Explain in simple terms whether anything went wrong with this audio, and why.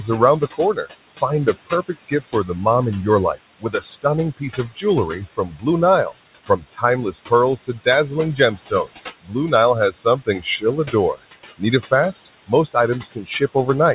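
Noise suppressor artifacts run through the whole clip. A filter keeps turning down whatever it judges to be steady background hiss, so the leftover noise pumps underneath the speech.

Speech cut by the noise suppressor happens from 0.02 to 2.66 s, from 3.35 to 9.34 s, and from 9.91 s to the end. The same filter mistook soft parts of speech for noise and turned them down, so they sound swallowed. This adds up to about 0.4 seconds in the first stretch and about a second and a half in the second.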